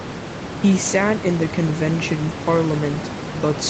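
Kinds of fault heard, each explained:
No fault can be heard anywhere in the speech. The sound stops at about 8 kHz, as expected after the call path's Opus coding, and room noise sits about 10 dB below the speech.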